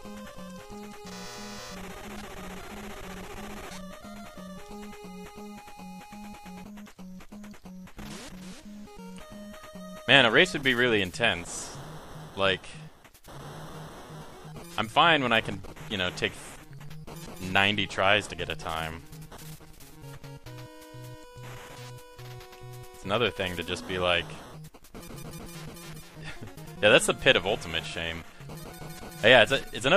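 Nothing in this recording stands out as a technical problem; it just runs along without a hitch the whole way.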